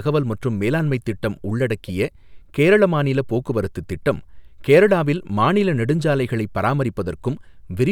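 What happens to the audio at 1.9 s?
At 1.88 s, just after "மற்றும் மேலாண்மைத் திட்டம்", a corrupt frame is decoded: flipped bits in one compressed frame send energy to wrong frequencies, giving a brief quiet chirp, squeak, blip or burst of noise peaking near -35 dBFS. A spectrogram shows a short, frame-wide smear of misplaced energy.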